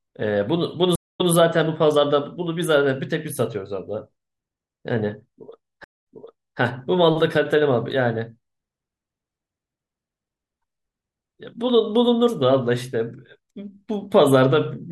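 A speech clip with two stream reconnects: at 0.96 s, 210 ms of silence then playback resumes 157 ms earlier; at 5.84 s, 176 ms of silence, resuming 575 ms back. Both show as flat gaps in the waveform and spectrogram, followed by repeated material that fades in.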